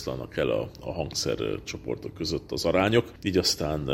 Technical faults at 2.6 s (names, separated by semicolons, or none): none